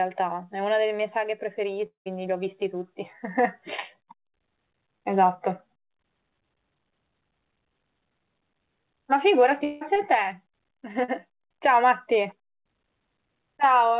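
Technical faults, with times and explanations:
Technical faults, with times and explanations:
1.86 to 2.08 s, long network dropout: roughly 0.2 s of audio likely never arrived. The receiver stretches the last sound into a fading buzz or hiss, with about 120 ms of it dropping to silence, and the sound resumes with that stretch gone.
9.64 to 9.83 s, long network dropout: about 180 ms is missing, likely lost in transit. Here the fill never decays to silence; the prior sound is drawn out as a fading buzz or hiss for the whole gap before real audio returns, minus the missing piece.
11.04 to 11.10 s, short concealed packet loss: about 40 ms failed to reach the decoder in time. The decoder carries the previous sound forward and blends back in, heard as a brief smear or wobble. The call path's G.711 A-law codec at 64 kbps leaves nothing above 4 kHz.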